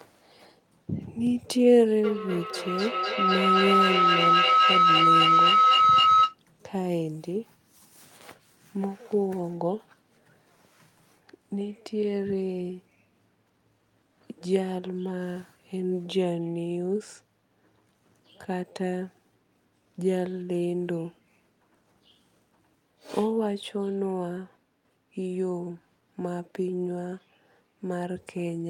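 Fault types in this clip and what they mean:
feedback howl: A mic is picking up a nearby speaker on the same call, and each trip round the loop adds level. From 2.04 to 6.39 s, a tone around 1.5 kHz builds up, with a loop delay of roughly 300 ms, peaking about 7 dB above the speech.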